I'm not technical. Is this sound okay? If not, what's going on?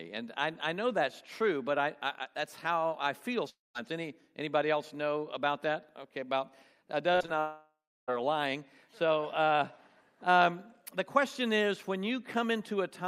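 No. A long network dropout at 3.49 to 3.77 s and again at 7.40 to 8.10 s: the sound trails off into a fading buzz, then goes silent before returning with a piece missing. The likely cause is audio failing to arrive for about a quarter second, then about two-thirds of a second.

Repeated packet loss (robotic sound) at 7.13 to 7.30 s: four short holes, the longest about 46 ms, each patched by stretching the previous sound. About half that stretch is patched, so it sounds choppy with pieces missing just before the second dropout.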